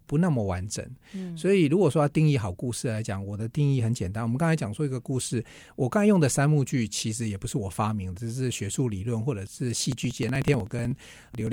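From 9.86 s to 11.47 s the speech has periodic USB or driver dropouts: every 62 ms a couple of milliseconds are skipped, heard as steady ticking. The waveform shows small jumps at that spacing; a spectrogram shows thin, evenly spaced vertical broadband lines.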